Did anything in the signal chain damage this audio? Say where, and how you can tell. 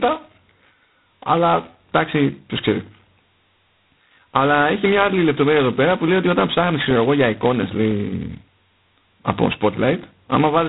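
Yes, at the codec stage, for the whole clip. This is G.726 ADPCM coding under heavy damage: the speech carries a harsh, rasping hiss that swells and shrinks with its level, which fits the 16 kbit/s mode, where only 2 bits a sample code the error of an adaptive predictor. On a spectrogram everything stops at a flat ceiling near 3.9 kHz, and a grainy noise wash fills the band beneath whenever speech is present, fading in the gaps.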